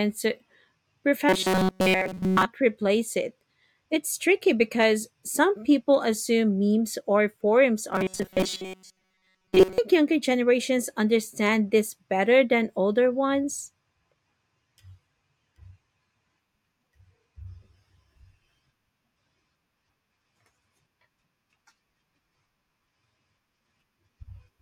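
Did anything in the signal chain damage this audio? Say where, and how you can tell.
Yes, at the driver or buffer stage: robotic sound from repeated short buffers, likely from audio arriving too seldom so the software loops the last few milliseconds. From 1.29 to 2.45 s, just before "replace it", and from 7.93 to 9.78 s, between "assume memes or forums" and "younger generations understand this", speech turns into a rigid metallic buzz at 188 Hz. That points to a chunk of roughly 5.3 ms being replayed over most of each stretch, with the real audio skipped.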